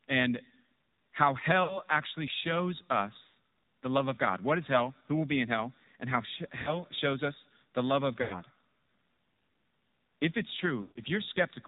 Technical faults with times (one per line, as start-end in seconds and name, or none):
0.00-11.68 AMR narrowband mobile codec
1.64-1.79 lost AMR speech frames
3.28-3.34 lost AMR speech frames
6.62-6.83 lost AMR speech frames
8.22-8.41 lost AMR speech frames
10.82-11.00 lost AMR speech frames